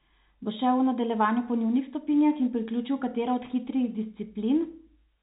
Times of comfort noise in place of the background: none

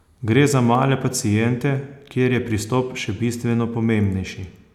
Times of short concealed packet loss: none

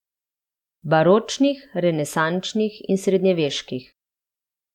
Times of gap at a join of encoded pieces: none

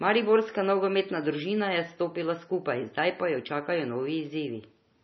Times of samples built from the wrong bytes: none

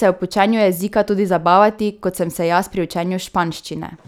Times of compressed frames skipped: none

